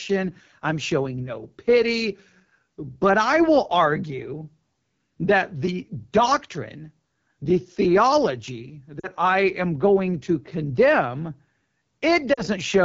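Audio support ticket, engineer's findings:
AMR wideband (HD Voice) codec, whole clip: rough, raspy speech, top band sounding like hiss, not real detail. Fits a low-rate AMR-WB mode, 8.85 kbit/s territory. The pulse-driven vocal tract model runs short of bits, so texture smears.

Lost AMR speech frames at 8.99–9.07 s (after "the doctrine the theology", before "I am going to") and 12.33–12.42 s: short warbly dips, then weak recovery. Decoder reused the last good settings with falling gain; gaps fit two 20 ms frames each.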